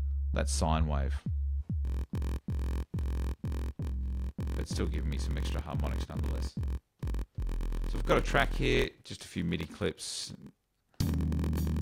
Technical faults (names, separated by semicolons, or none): block size mismatch (padded)